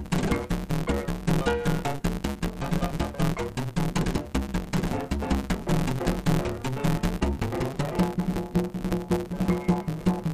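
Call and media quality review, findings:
Block size mismatch (truncated), whole clip. Buzz at 138 Hz, audio 1.6x fast, pitch about normal. Block tails dropped between buffer stages, consistent with 512-sample writes.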